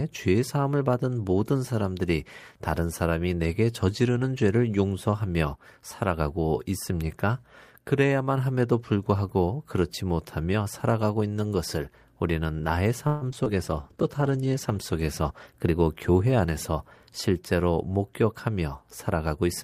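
A fading buzz at 13.07 s hangs on the last sound of this speech recording for about 141 ms before the talker resumes at 13.24 s, with nothing lost, only a pause inserted. This is a call audio freeze: packets were held up in transit, the jitter buffer emptied, and the receiver stretched the final sound until delivery restarted. The likely cause is a network stall, and the inserted wait pushes the rest of the call about 141 ms later. Right after it come two brief smears, at 13.32–13.34 s and 13.44–13.48 s. Each is a short concealed packet loss in which about 20 ms of audio failed to reach the decoder in time. The receiver patched each hole by extending the preceding sound and then blending back into the real signal, so a quick consonant there can blur or drop. From 13.50 s to 15.63 s the speech turns rougher, watery and muffled. This is a call bitrate drop: the bandwidth estimate fell and the encoder was told to halve its rate from 32 to 16 kbps, holding the lower rate for about 2.09 s. 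At that rate Opus quantises more coarsely and trims the top of the spectrum. Overlapping the end of that stretch, from 15.30 s to 16.47 s, the delivery sounds hurried while the pitch stays put. This is a jitter buffer speed-up, running at about 111% of normal speed. The buffer had built up surplus delay, so the receiver cut out many tiny pitch-period slices, roughly 150 ms in total, to catch back up.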